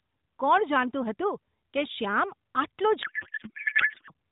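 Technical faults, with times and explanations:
3.02 to 4.12 s, codec payload misread: for this stretch near the end the speech gives way to garbled noise and a watery warble that barely tracks it. The decoder is still getting well-formed AMR frames but is unpacking their bits from the wrong positions, which fits octet-aligned frames being parsed as bandwidth-efficient ones, so the vocal-tract parameters and pulse positions it rebuilds are nonsense until the packing agrees again.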